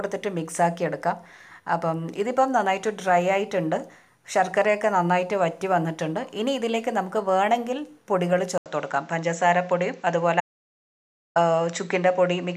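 At 8.58 s there's a short gap of about 80 ms, and then the sound comes back duller and boxier. Nothing reaches above 7.9 kHz any more, and a new, faint background noise sits well below the signal, roughly 40 dB down. Loudness barely changes. That pattern points to the input likely being switched to a poorer device partway through, with the narrower band and different noise floor carrying on to the end.

Then from 10.40 s to 11.36 s the audio drops out to silence completely, about 0.95 s with no room tone at all. It's plain silence rather than a quiet passage, so whatever was happening in that stretch is simply gone. The likely cause is the input being lost briefly, through a disconnect, a failed link or a stray mute, while the recorder kept writing samples.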